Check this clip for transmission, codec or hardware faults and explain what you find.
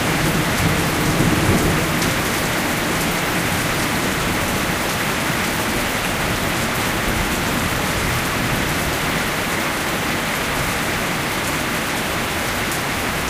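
There is one fault, DAB burbling, at 3.78 to 4.14 s and 5.70 to 6.07 s. Bit errors of roughly 0.5 and 0.4 percent slipped past error correction, putting short blips of noise into single sub-bands.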